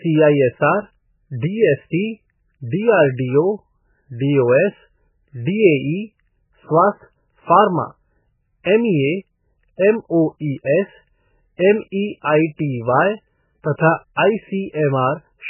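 Throughout, the speech is cut off above 3 kHz and sounds watery and swirly, likely from heavy MP3 compression at a very low bitrate; the shifting chirps rule out simple low-pass filtering.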